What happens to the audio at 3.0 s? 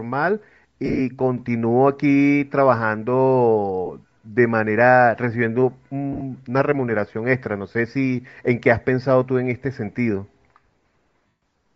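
At 3.0 s the speech carries a breathy, grainy edge with a noisy upper band, likely from Bluetooth LC3 compression running throughout, consistent with roughly 32 kbps filling the zeroed treble with noise.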